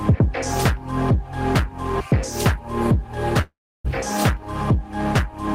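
From 3.41 to 3.86 s there is a long network dropout: the stream most likely stopped delivering packets, so the receiver had nothing new to play and kept extending its last sound. The tail just before 3.41 s smears into a buzzy, fading continuation, which then gives way to about 0.31 s of silence. When the audio resumes at 3.86 s it jumps ahead, and roughly 0.44 s of the original material is gone.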